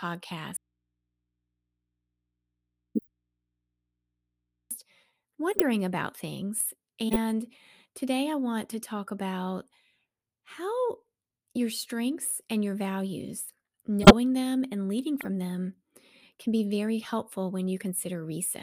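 Speech, with an audio dropout to a faint residue from 0.57 to 4.71 s: about 4.1 s gone, leaving only mains hum roughly 50 dB down, likely an input losing its source while the line stayed live. There are also corrupt frames decoded as short chirpy bursts at 2.95, 5.52, 7.09 (right after "about things"), 12.22, 14.02, 15.21 and 17.02 s, where damaged compressed frames were played anyway.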